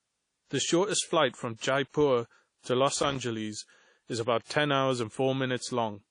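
Speech runs through the whole clip with a ringing, washy texture and hiss that moves with the signal. Nothing is heard above 10.1 kHz. The damage is plainly audible. The likely cause is WMA compression, and the sound fits a low bitrate around 32 kbps. Long transform blocks smear quantisation noise over time and cut weak detail. From 3.03 to 3.19 s there is an irregular burst of loose connector crackle, lasting about 0.17 s. A contact making and breaking chops the signal into scratchy bursts.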